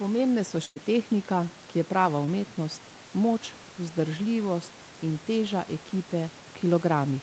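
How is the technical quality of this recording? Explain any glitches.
Two brief dropouts disturb this speech recording, one early and one small; both come from packets lost on the call path. The audio is band-limited to about 8 kHz by the Opus call codec, and room noise sits about 24 dB below the speech.

From 0.65 to 0.78 s, just before "tehnika ki", the last sound is stretched into a held, fading sound for about 0.1 s, and then the speech jumps ahead. This is a burst of packet loss: about 100 ms of audio never arrived, so the receiver extended and faded the previous sound, and the missing stretch is simply gone.

Around 2.26 to 2.29 s there is a very short smear, with a few hundredths of a second sounding blurred. This is short concealed packet loss: roughly 20 ms of audio didn't reach the decoder in time, and the receiver continued the preceding sound briefly before blending back into the real signal.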